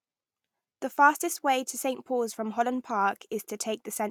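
No technical faults are audible anywhere in the recording.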